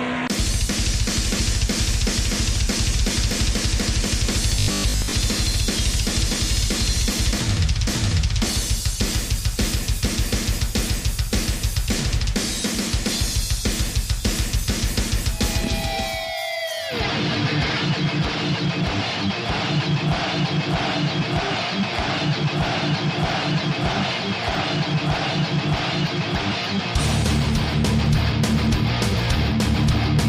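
Between 4.56 and 5.12 s, new audio likely arrived too seldom, so a roughly 20 ms stretch kept repeating over most of the real sound: robotic sound from repeated short buffers, a rigid 50 Hz buzz.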